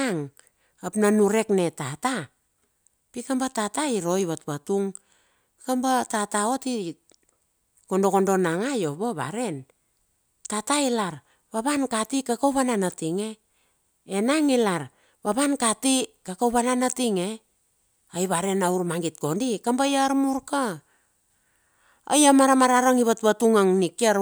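No technical faults can be heard anywhere in the recording.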